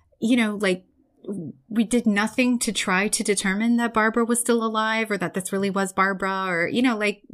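Nothing stood out as a technical fault on listening to this speech recording.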